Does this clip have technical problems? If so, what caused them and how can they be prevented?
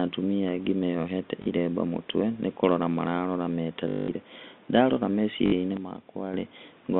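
Yes. Packet loss with last packet repeated occurs twice, from 3.88 to 4.08 s (200 ms) and from 5.46 to 5.52 s (60 ms). During each gap the receiver replays its last packet until new audio arrives. Such repeats seldom align with the pitch cycle, and the longer run becomes a robotic buzz near 50 Hz, which points to 20 ms packets over this telephone-band G.711 line. A jitter buffer with packet loss concealment, plus forward error correction or redundancy, would prevent it.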